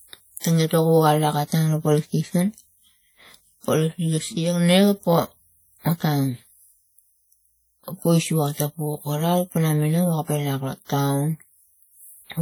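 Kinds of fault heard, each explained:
WMA compression: plainly audible ringing, washy smearing and hiss breathing with the speech throughout, likely from transform coding at a low bitrate, which fits about 48 kbps.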